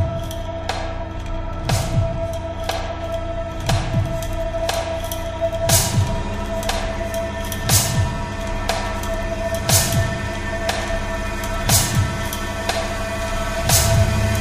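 From 3.00 s to the end at 14.40 s, pre-emphasis is left on: the treble lift applied before recording or transmission was never undone by its matching de-emphasis. Content near 10 kHz sits about 8 dB higher relative to 1 kHz, a tilt that fits the CD 50/15 µs curve. The sound turns thin, bright and hissy-edged. A spectrogram shows the upper bands suddenly brighter from 3.00 s onward, and the waveform gains sharper, spikier transients.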